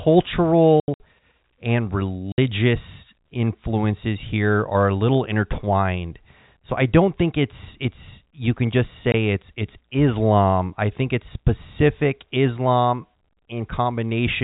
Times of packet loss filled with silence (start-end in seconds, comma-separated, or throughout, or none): 0.80-1.00, 2.32-2.38, 9.12-9.14